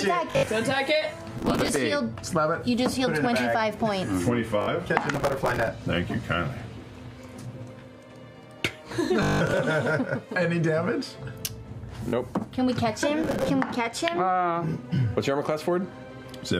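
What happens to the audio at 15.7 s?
Nothing goes wrong at 15.7 s, and the audio carries on intact through that moment.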